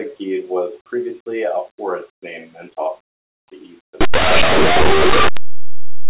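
Speech, where after "to the east" the sound turns into very loud, harsh distortion from 4.01 s to the end at 6.09 s. This is linear audio read as companded: plain linear 8-bit samples are being expanded as if they were mu-law codes, so tiny values on one side of zero become maximum outputs. The waveform fills to a dense block, and the spectrogram shows a broadband smear.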